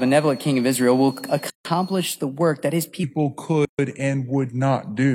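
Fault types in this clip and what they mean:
switching supply whistle: A switching power supply running in an audible mode leaves a high whistle drifting between 4.3 and 4.5 kHz, about 25 dB below the speech, through the first 2.15 s.
gap at a join of encoded pieces: Separately encoded pieces were joined with their start delay and end padding left in, so gaps of 151 ms at 1.5 s and 136 ms at 3.65 s cut into the speech.
section at the wrong speed: The last part was likely played against the wrong clock, so from 3.04 s to the end the speech runs at 0.829 times its speed, roughly three semitones lower.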